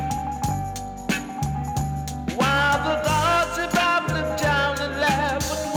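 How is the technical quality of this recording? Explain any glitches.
No glitches or faults are audible anywhere in the recording.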